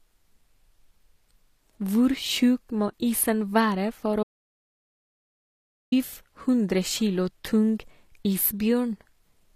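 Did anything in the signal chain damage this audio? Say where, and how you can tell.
Yes. Throughout the speech the upper range sounds synthetic: sibilants turn gritty and lispy, and nothing is present above 14.9 kHz. This is codec damage, likely HE-AAC compression at a low bitrate, consistent with about 24 kbps, where spectral band replication rebuilds the treble from copied lower bands.

From 4.23 s to 5.92 s there is an audio dropout to silence. The sound cuts off mid-flow for about 1.7 s into silence with no room tone, then resumes abruptly. That points to the input device or link losing signal while recording continued, writing empty samples.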